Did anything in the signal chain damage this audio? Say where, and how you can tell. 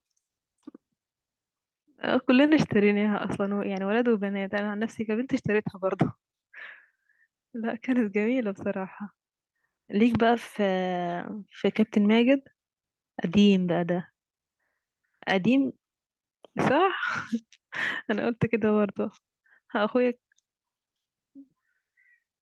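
No, nothing along the way left a mark on this one; the speech comes through with no damage from any stage of the chain.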